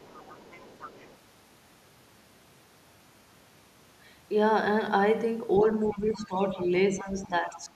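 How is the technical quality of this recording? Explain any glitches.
The recording has two echo-related faults.

Other side's voice leaking through appears from 0.0 to 1.16 s, then at 5.7 to 5.97, 6.13 to 6.27, 6.6 to 6.65 and 7.23 to 7.27 s. A faint second voice sits roughly 20 to 30 dB under the talker, likely loudspeaker echo the canceller left behind. On a spectrogram it shows as weak, separate harmonic traces beneath the main speech.

Speech suppressed in double talk occurs from 5.93 to 6.59 s and 6.9 to 7.71 s, about half a second and 0.7 s affected. The talker's level dips by up to around 10 dB, likely because the canceller attenuated everything while both sides spoke. The waveform envelope sags.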